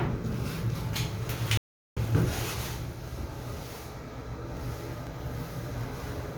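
At 1.57 s the audio drops out completely for about 0.39 s. When it returns at 1.98 s it doesn't pick up where it stopped. It jumps ahead by roughly a fifth of a second, so a short stretch of the sound is missing. This is a stream reconnect: the connection broke, the player went quiet while it reconnected, and a new decoder joined the live stream at a later point.

From 3.08 s to 5.07 s there is a regular series of small ticks, about five of them, spaced almost exactly every 0.5 s. Each is a tiny discontinuity where around a millisecond of audio is simply skipped rather than replaced with silence, so the waveform jumps and clicks. The even spacing points to periodic USB or driver dropouts: a background task repeatedly blocks the audio path at a fixed interval, and a sliver of signal is lost each time.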